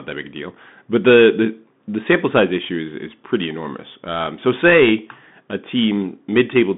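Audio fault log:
Throughout: Bluetooth CVSD headset codec. The speech sits in a narrow 150 Hz to 3.6 kHz band with nothing above 3.8 kHz, which fits a 64 kbps CVSD link. Its one-bit up/down coding leaves granular hiss underneath, scratchy s sounds, and distortion where loud high content outruns the adaptive step.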